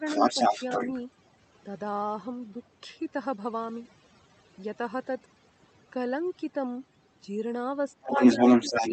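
Overdone noise removal runs through the whole clip. The suppressor is set so aggressively that any frequency band close to its noise estimate gets pulled down or switched off, and the quieter parts of the speech go with it. The background collapses to near silence dotted with twinkling specks. Separately, the high end stops at around 8 kHz, consistent with a wideband call codec.

Speech suppressed in double talk opens the clip, from 0.0 to 0.05 s, with the talker dipping by about 10 dB. It returns at 7.95 to 8.14 s (about 10 dB), 8.34 to 8.4 s (about 5 dB) and 8.57 to 8.76 s (about 10 dB), so the voice ducks in short pieces. The likely cause is the echo canceller failing to tell the local talker apart from loudspeaker echo while both sides speak, and turning everything down.

The other side's voice leaking through follows from 0.05 to 1.01 s and again from 8.05 s to the end. A second voice comes through alongside the talker at roughly 10 dB relative to the speech. 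That second voice is most likely far-end audio played on the talker's loudspeaker, picked up by the microphone and not fully cancelled. It overlaps the late dips, which fits both sides talking at once.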